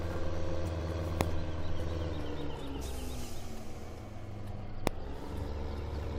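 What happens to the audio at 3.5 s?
Nothing goes wrong at 3.5 s; the audio plays through that moment intact, with no dropout, click, glitch or other fault.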